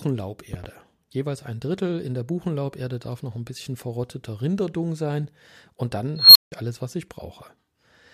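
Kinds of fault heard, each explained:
Loud pop: The likely cause is a sudden voltage jump, such as a plug or switch contact, static discharge or a driver glitch, entering the signal path, where the following circuitry shapes it into a brief pulse. Here it produces two sharp pops in quick succession between 0.54 and 0.66 s, standing roughly 10 dB above the speech level. The speech carries on underneath without interruption.
Unstable filter: A recursive filter running with bad coefficients fed its own output back with growing gain, so its output kept climbing until the numbers overflowed and the filter reset. From 6.16 s a high tone at around 4 kHz swells over about 0.19 s into a loud, clipped squeal. The audio then drops out for about 0.17 s before the filter recovers, with the whole event ending at 6.52 s.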